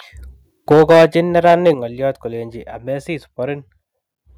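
From 0.70 to 1.05 s the speech shows microphone overload. Peaks drive about 8 dB past the converter's limit, and roughly a fifth of the samples are flattened. The loudest syllables turn harsh and crackly. The likely cause is input volume set too high. At 0.73 s, inside that burst, the microphone volume is stepped down by about 3 dB. Voice and background drop together, likely because the call software reacted to the clipping. A second, milder overload runs from 1.35 to 1.71 s. It is about 3 dB over, with only a few percent of samples cut, so the edge is fainter. At 1.74 s, just before "ngoliot kolenji", the level steps down again, this time by about 7 dB. The drop is abrupt.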